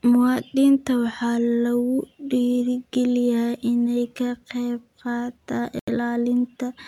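A likely Bluetooth stall occurs at 5.79 s: radio interference appears to have delayed packets on the wireless link, so the headphones' playback buffer emptied before the resent data arrived. With nothing left to play, the output drops to silence for about 83 ms, ending at 5.88 s. The speech halts abruptly, leaving a short, clean gap, then resumes rather than fading back in, giving a brief stutter close to the end of the clip.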